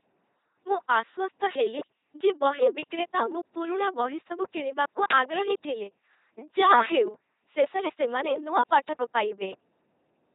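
From start to finish the speech passes through an LPC-10 vocoder, and the damage is heavy. Each moment is rebuilt from a short all-pole filter excited by either a buzzing pulse train or noise, never a mix. The voice therefore comes out mechanical and robotic, with buzz or hiss wherever the voiced/unvoiced choice goes wrong. Nothing remains above 3.8 kHz, and the coarseness fits a 2.4 kbit/s stream.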